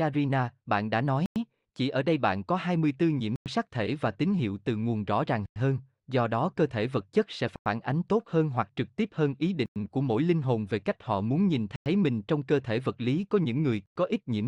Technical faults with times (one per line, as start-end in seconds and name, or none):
1.26-1.36 gap between chunks
3.36-3.46 gap between chunks
5.46-5.56 gap between chunks
7.56-7.66 gap between chunks
9.66-9.76 gap between chunks
11.76-11.86 gap between chunks
13.86-13.96 gap between chunks